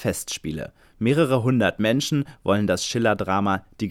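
Speech recording with no technical faults to report.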